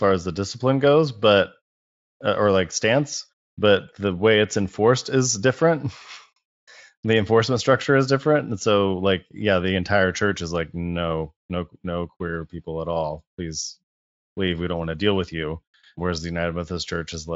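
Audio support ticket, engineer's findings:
No faults found: the speech comes through the Speex path with content up to about 7.7 kHz and nothing above it, which fits a wideband voice codec running at a high quality setting.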